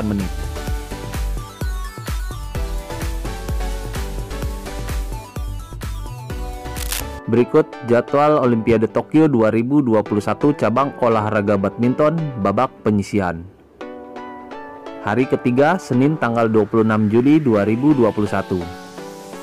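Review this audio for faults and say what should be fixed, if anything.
Cable scratch noise, 6.77 to 7.01 s: ragged rustling roughly 10 dB under the sound, likely a worn connector shifting, unlike one sharp digital click. Replace or reseat worn cables and keep connectors still while recording.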